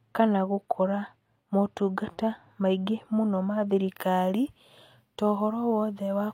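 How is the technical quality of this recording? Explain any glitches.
The recording has one clear fault in its final part. From 3.89 s to the end at 6.34 s, pre-emphasis is left on: the treble boost applied before recording or transmission was never undone. The highs sit about 11 dB above 1 kHz at 10 kHz, consistent with a 50 µs FM curve, so the speech turns thin, bright and hissy-sibilant. Unlike a resonant peak or harsh microphone, the lift rises smoothly and keeps climbing toward the top of the band.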